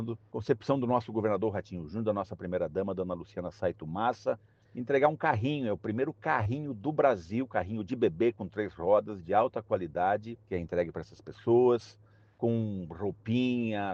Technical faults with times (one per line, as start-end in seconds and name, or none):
6.43-6.47 short concealed packet loss